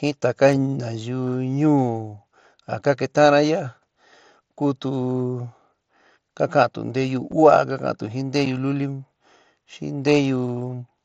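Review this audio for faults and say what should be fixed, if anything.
Two short dropouts of unconcealed Bluetooth headset packet loss: one at 7.32 s, right after "ka kantu nteyu", and another at 8.46 s, just after "ka ka'antu jin". Each is a hole of about 7.5 ms, which fits a single lost frame on the wideband mSBC headset link. The missing stretch was filled with silence or an idle pattern instead of being patched over, so you get a hard-edged gap at each spot. To prevent it, enable packet loss concealment on the receiving side and improve the headset's radio link, for example by keeping the phone closer and reducing 2.4 GHz interference.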